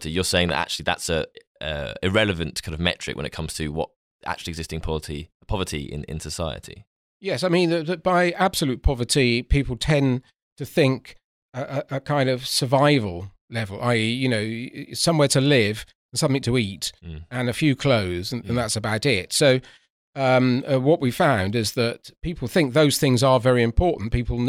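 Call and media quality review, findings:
Loud pop, speech continues underneath: double pop 0.49–0.66 s, just before "that's a uh irrelevant"; single pop 9.90–9.92 s, after "by absolute poverty people". Peaks about 10 dB over speech. Waveform: sharp spikes. Spectrogram: full-band vertical lines. Likely switching transient or static discharge.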